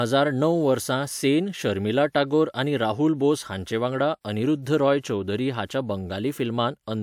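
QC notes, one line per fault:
No faults heard anywhere in the speech.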